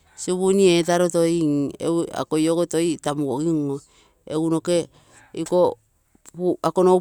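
No technical faults can be heard in the speech. Nothing in the audio stands out as a fault at any point.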